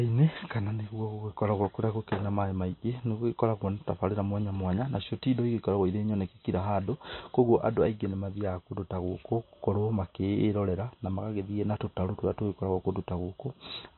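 From start to finish the speech carries plainly audible MP3 compression damage, likely from encoding at a very low bitrate, around 25 kbps. Nothing is present above 4 kHz, so the top end is cut flat and the voice sounds dull and band-limited. With so few bits available, weak frequency components drop in and out between frames, giving a watery, swirling texture, chirpy sibilants and smeared consonant onsets.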